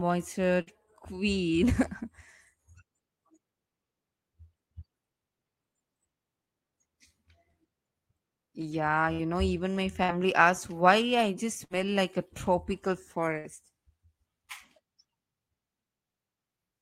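A burst of packet loss hits twice, at 0.61 to 0.70 s and again at 11.64 to 11.73 s. Each time, about 60 ms of speech never arrives, and the receiver fills the gap by stretching and fading the last sound before the speech resumes further on.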